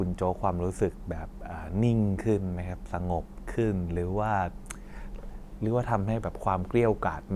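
Nothing stood out as a technical fault on listening to this speech recording.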